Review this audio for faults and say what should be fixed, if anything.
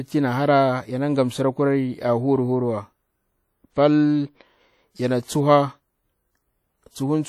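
Throughout the speech there is a ringing, washy quality with a hiss that swells and fades with the level, most likely from WMA compression. The damage is plainly audible, which fits a low bitrate of around 48 kbps. The transform encoder spreads quantisation noise across long blocks and zeroes weaker spectral lines. On a spectrogram this shows as speckled, patchy harmonics with holes between them and a noise haze tracking each syllable, while content still reaches 20.1 kHz. Encode from the original at a higher bitrate or use a lossless format to prevent it.

At 5.24 s a pre-echo appears, a brief hiss lasting 45 ms, ending at 5.28 s, ahead of a sharp attack. The codec spread noise sized for the loud onset across its whole block, so the quiet moment before it filled with that noise and the attack itself sounds softened. On a waveform it looks like a fuzzy ramp rising before the transient, and on a spectrogram like a broadband smear leading into the onset. 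Using an encoder with block switching or shorter transform windows for transients would prevent this.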